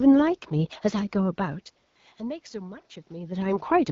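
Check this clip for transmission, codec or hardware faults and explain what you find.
One transmission fault is audible: a short burst of AMR comfort noise.

From 1.87 to 1.95 s, about 80 ms, the real background drops out and is replaced by a smooth, steady hiss. The sending handset judged the talker silent and stopped sending speech frames. The receiver then generated noise from a coarse description of the background's level and spectral shape. The room noise is briefly swapped for this synthetic fill and switches back abruptly. The clarity of the wideband coding, which fits a rate around 12.65 kbit/s, is unaffected.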